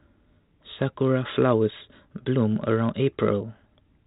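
Nothing stood out on listening to this speech, which carries the narrow telephone band expected of G.726 coding at 32 kbit/s.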